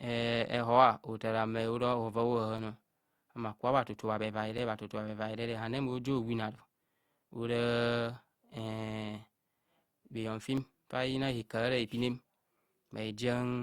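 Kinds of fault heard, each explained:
Periodic USB or driver dropouts: every 2.0 s from 0.58 s to 12.57 s, a recurring system task stalls the audio path and a few milliseconds of speech are replaced by silence, giving evenly spaced ticks that sound only where speech is present.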